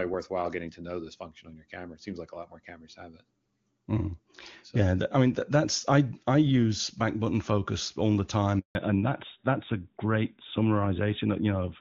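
Up to 8.59 s the call sounds like HD Voice running near the top of its range, clear and full. Then comes a handover gap: the sound drops out abruptly and stays silent for about 160 ms, until 8.75 s. That's the phone switching networks mid-call with no speech frames getting through during the hop, so whatever was said in that stretch is simply gone, not muffled or smeared.

When the audio comes back at 8.75 s it has fallen back to narrowband and stays that way to the end. The top end is cut off hard at 4 kHz, so the sound turns duller and a bit rougher, with the crisp sibilance and airiness gone. It sounds like the new link negotiated the older narrowband codec, likely AMR-NB at around 12.2 kbit/s, in place of the wideband one.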